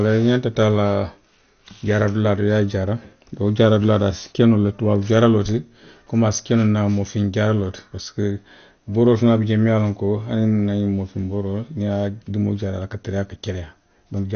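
Throughout the speech the sound is dull and muffled, with nothing above 6.5 kHz, and a gurgling, granular roughness. That points to MP2 compression, likely at a low rate near 48 kbps, where starved upper sub-bands switch off and the rest are coarsely quantised.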